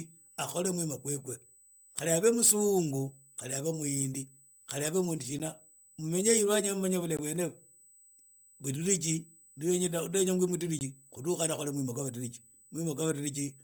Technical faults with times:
0.00-13.64 USB whine
0.00-13.64 Bluetooth LC3 compression
5.39 block of digital silence
7.17 block of digital silence
10.79 block of digital silence

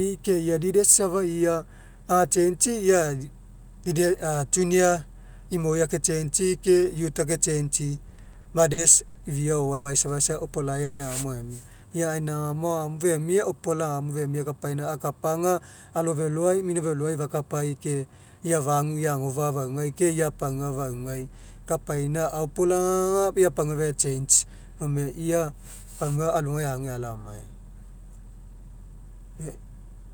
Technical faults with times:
8.09-9.17 repeated stalls (stutter)
9.73-9.87 call audio freeze
10.84-11.02 call audio freeze
12.08-13.77 jitter buffer slow-down
15.38-18.90 jitter buffer speed-up
21.33-23.28 jitter buffer slow-down
25.13-30.09 jitter buffer speed-up

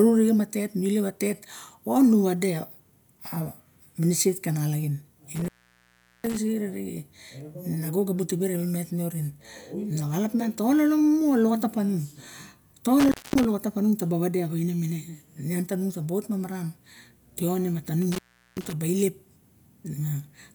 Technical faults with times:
5.35-6.37 intermittent contact
13.00-13.45 intermittent contact
18.02-18.73 intermittent contact

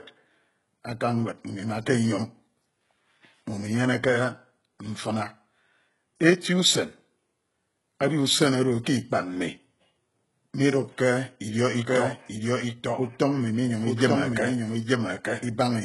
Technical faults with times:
0.00-15.85 HE-AAC compression
11.87-15.85 doubled audio track

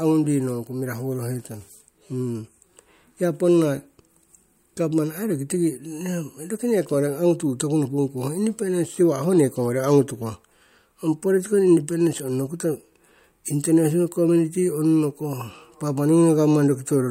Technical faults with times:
none

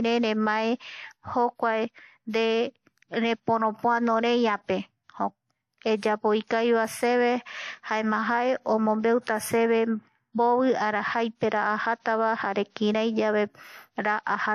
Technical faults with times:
0.00-14.54 transcoding between lossy codecs

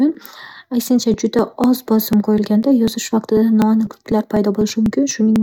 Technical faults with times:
0.15-5.36 periodic USB or driver dropouts

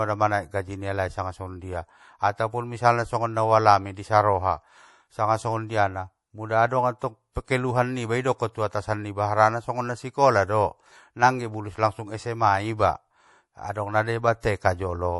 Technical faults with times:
0.00-15.20 MP3 compression

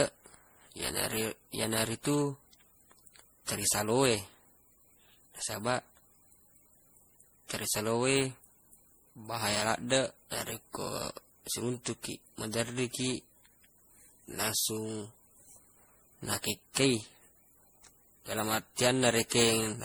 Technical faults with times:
0.00-19.85 generation loss

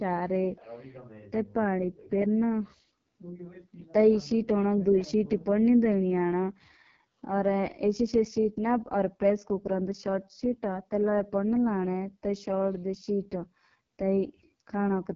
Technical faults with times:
0.00-15.15 AMR wideband (HD Voice) codec

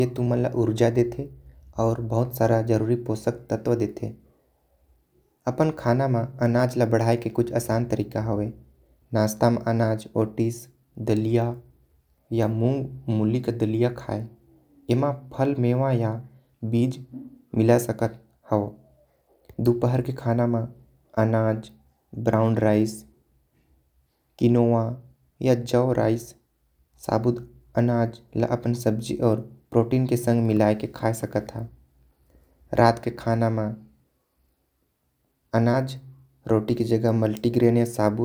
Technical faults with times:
none

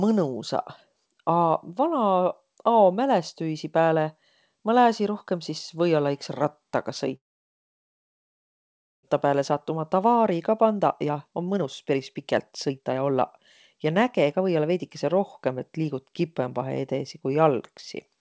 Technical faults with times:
7.16-9.09 long network dropout
9.25-14.83 jitter buffer speed-up

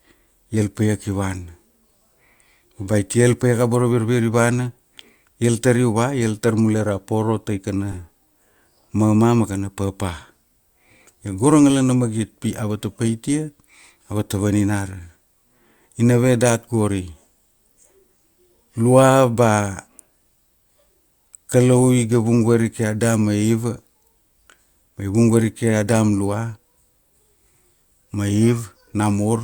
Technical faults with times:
7.92-7.95 corrupt frame decoded

